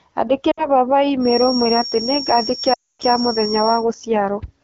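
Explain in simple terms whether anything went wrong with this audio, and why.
Two things went wrong in this speech. From 0.51 to 0.67 s the speech briefly wobbles and dips, and from 2.73 to 3.03 s it quickly drops to near silence. These are lost AMR speech frames: radio errors corrupted chunks of the phone signal, so the decoder guessed at the missing sound and gradually faded it out.

From 1.19 to 3.87 s a thin high whistle at one pitch, near 5.5 kHz, sits just under the speech, slowly swelling and fading. This feedback whistle is likely caused by the loudspeaker's sound leaking back into the microphone, hovering just short of full howling feedback.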